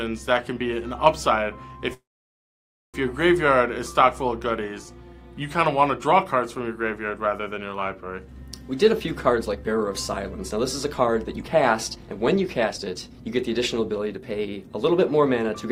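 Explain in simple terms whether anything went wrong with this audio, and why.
Two things go wrong. From 1.93 to 2.97 s there is a call audio freeze: the sound stops moving forward, a brief trailing buzz fades, and most of that second is silence. The likely cause is that packets were held up in transit, so the receiver's jitter buffer ran dry and it had to fill time. When the packets arrived, the sound picked up where it stopped, so nothing is lost, just a one-second gap.

From 8.92 to 15.67 s there is a jitter buffer speed-up. The receiver was now holding about a second more audio than it wanted. To catch up, it repeatedly cut out tiny slices of the sound, each one or a few cycles of its pitch. The result plays at about 115% speed without changing pitch, so this stretch sounds hurried until roughly a second has been trimmed away.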